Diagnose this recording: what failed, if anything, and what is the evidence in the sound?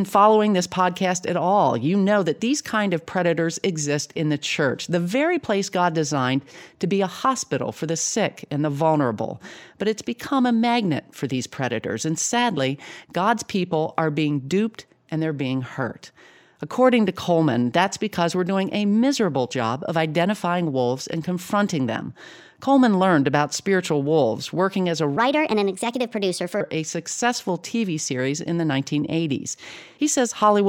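A section at the wrong speed, most likely from a sample-rate or clock mismatch at the editing or playback stage, runs from 25.17 to 26.61 s. Just after "working as a", the speech jumps to 1.31 times its recorded speed, so timing compresses and the pitch rises by roughly five semitones, sounding hurried and high. Because speed and pitch shift together, the samples are being read out faster than they were captured. Normal speed returns before "a successful".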